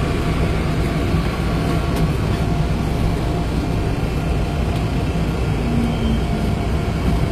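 Throughout, the treble is rebuilt rather than real, likely from HE-AAC compression at a low bitrate near 24 kbps. It sounds plainly artificial, with nothing above 14.9 kHz.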